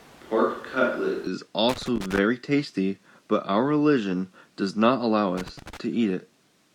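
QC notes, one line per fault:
0.00–1.27 s, switch to a distant microphone: already under way at the start, sound is roomy and hollow with thin bass and room noise roughly 25 dB below speech at unchanged level, likely a far microphone standing in, snapping back at 1.27 s.
1.69–2.19 s and 5.37–5.77 s, loose connector crackle: irregular scratchy crackle bursts as a worn or dirty contact rapidly makes and breaks, chopping the signal.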